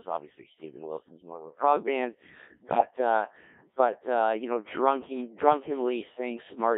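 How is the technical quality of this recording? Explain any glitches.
Pretty rough, honestly. The whole thing has been through a very low-rate digital radio vocoder, and there's one short burst of corruption partway in.

Codec 2 vocoder, throughout: the speech sounds robotic and buzzy, squeezed into roughly 250 Hz to 3.6 kHz. The decoder rebuilds the voice from sine waves using only pitch, voicing, level and a rough spectral shape. The damage is heavy, which fits a mode of around 1.3 kbit/s.

Bit errors on digital voice radio, 2.68 to 2.90 s: for about a fifth of a second the voice suddenly warbles and bleeps, jumping in pitch, level and tone. Roughly one bit in twenty arrived flipped, and each bad bit scrambles the parameters of a whole frame. Here that hit a handful of frames in a row.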